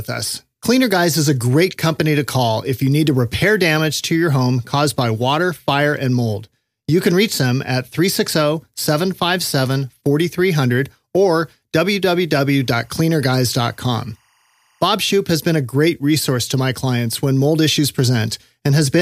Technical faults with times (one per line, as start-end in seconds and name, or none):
12.62-14.82 timecode bleed